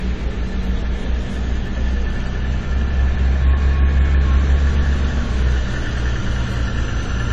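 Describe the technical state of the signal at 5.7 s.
Dull, smeared and fizzy at 5.7 s, as throughout the clip, with nothing above 12.9 kHz. This is likely AAC compression at a low bitrate (consistent with about 32 kbps), whose coarse quantisation drops the top band and hollows the spectrum.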